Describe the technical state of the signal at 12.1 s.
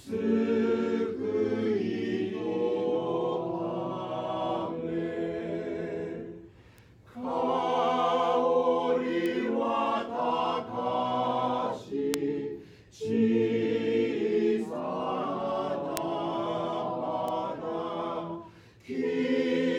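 At 12.14 s there's a bit error spike: a single sharp tick that cuts through whatever the sound is doing at that point. It's three samples long, so it sounds instantaneous. A flipped bit in memory or on a digital link knocks those sample values off by a power of two, peaking at about -5 dBFS, and then they snap straight back. That's why it's broadband and has nothing to do with the surrounding audio.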